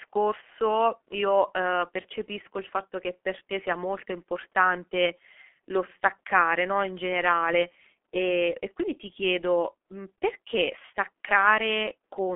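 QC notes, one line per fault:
Throughout, G.723.1 codec: heavy low-bitrate speech coding at about 6.3 kbit/s on a telephone line passing roughly 250 Hz to 3.4 kHz, nothing above 3.7 kHz. Coarse 30 ms frames and a slowly updated voice model leave the speech muffled and hoarse, with smeared consonants.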